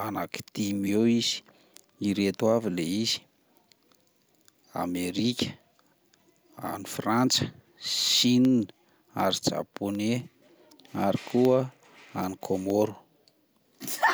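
From 8.45 s to 13.95 s, periodic USB or driver dropouts cut the speech every 0.25 s, each losing a tiny sliver of a millisecond to silence. About twenty regular ticks result, audible only over signal. The spectrogram shows evenly spaced thin vertical broadband lines, and the waveform shows brief drops to silence.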